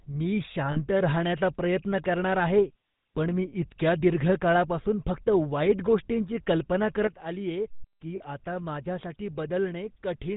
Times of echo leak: none

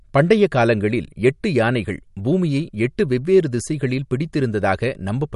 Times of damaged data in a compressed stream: none

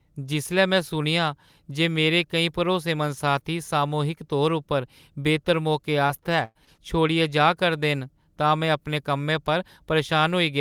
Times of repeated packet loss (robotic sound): 6.07-6.80

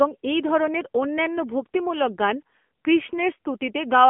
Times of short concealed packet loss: none

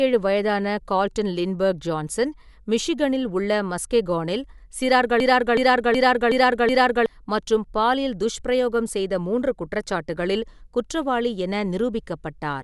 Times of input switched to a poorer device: none

